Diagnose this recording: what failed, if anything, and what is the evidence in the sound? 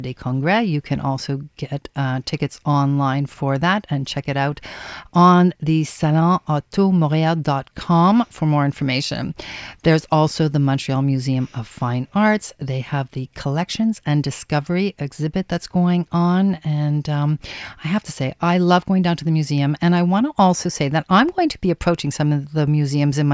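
Nothing failed; no faults heard.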